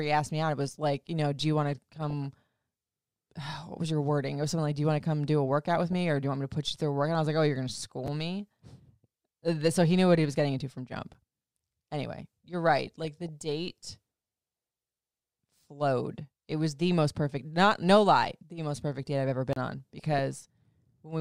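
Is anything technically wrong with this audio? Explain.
Yes, the speech carries three kinds of fault.

DAB burbling occurs at 1.96–2.25 s, 5.74–5.93 s, 12.87–13.29 s and 19.98–20.19 s. Bit errors at a fraction of a percent slip past error correction, putting short blips of noise into single sub-bands.

Chunks out of order occur at 8.06 s. A 5.8 ms chunk plays two chunks late, so the hard joins give a brief jumbled moment.

A block of digital silence occurs at 11.14 s, lasting about 10.7 ms, which fits a 512-sample buffer left unfilled. Another runs from 19.53 to 19.56 s, lasting 32 ms. Both cut out abruptly with no fade, the first heard as a tick and the second as a short hole.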